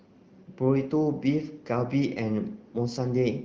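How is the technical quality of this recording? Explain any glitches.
No glitches or dropouts turn up anywhere in the recording. The speech carries the band-limited character of the AMR wideband (HD Voice) codec, but the coding damage is light, which fits one of its higher rates, around 16 kbit/s.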